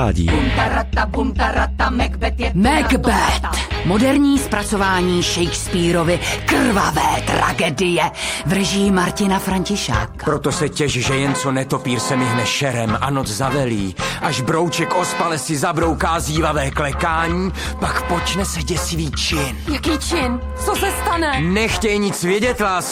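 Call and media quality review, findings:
No audible transmission or processing defects found across the capture; signal level, continuity and timing hold steady throughout, with nothing requiring a ticket.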